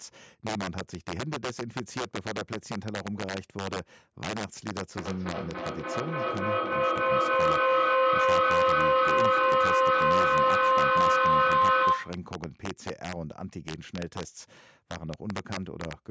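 From the start of the speech, integer overflow cracks on the peaks. Peaks driven about 5 dB past full scale, around one percent of samples, wrap to the opposite sign instead of being limited. The waveform shows peaks snapping from top to bottom, and the spectrogram shows broadband vertical streaks. The cracks are far harsher than clipping.

From 4.97 s to 12.28 s a feedback howl builds. A microphone-to-loudspeaker loop gains level on each pass and narrows to a tone near 1 kHz, with repeats roughly every 0.3 s, peaking about 11 dB above the speech. The spectrogram shows a thickening horizontal band.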